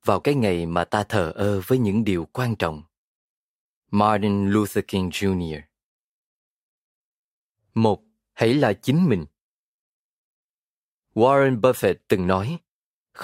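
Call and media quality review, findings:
No faults found in the speech recording. No component flagged and no ticket action required.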